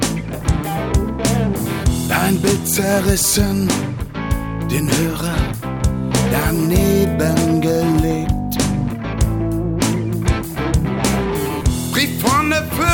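No technical faults can be heard anywhere in the clip. Nothing in it interrupts or disturbs the sound at any point.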